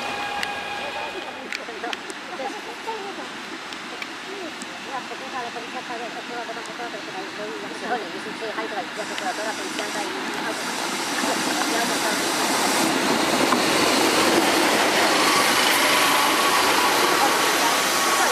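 A wrong sample rate affects the audio throughout: everything runs about 1.38 times too fast and sits roughly 5.5 semitones too high, so the sound comes across as sped-up and shrill. Speed and pitch shift together because the samples are being clocked out faster than they were captured, with no resampling in between. That ratio fits material recorded at 32 kHz being played back at 44.1 kHz.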